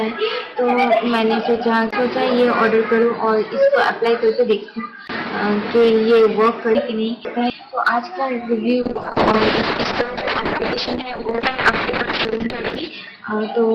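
From 6.75 to 7.5 s, chunks out of order: a 250 ms block arrives two blocks late and plays after material that should follow it. The section sounds jumbled. At 8.83 s a call bitrate drop begins. The encoder falls from 32 to 7 kbps and holds its lowest rate for about 4.1 s. Bandwidth narrows from 20 kHz to 6 kHz, so the sound turns muffled and rough and stays that way to the end of the clip. Between 12.25 and 12.75 s, inside that degraded stretch, a second chunks-out-of-order fault appears. This time a 250 ms block lands one block late, causing another brief jumbled moment.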